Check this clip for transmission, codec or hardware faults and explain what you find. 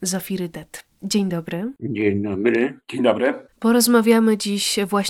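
One fault stands out: channel delay, heard as comb filtering. It runs from 1.54 s to 3.26 s of the speech. One channel arrives a few samples late, roughly a tenth of a millisecond behind the other. When the two are summed to mono, shared content cancels at evenly spaced frequencies. The first notch sits around 5 kHz. The speech turns hollow and phasey there, with the upper range dulled by fixed notches.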